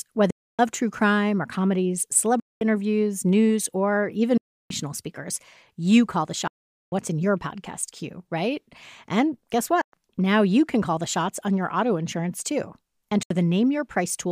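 Speech cuts to silence six times, at 0.30–0.59, 2.40–2.62, 4.37–4.71, 6.47–6.93 (between "speakers you call the" and "in your podcast queue"), 9.81–9.94 and 13.23–13.31 s, then resumes further along as if it had kept playing. This is likely a Bluetooth dropout, where late packets to the headphones were discarded, losing 70 to 440 ms each time.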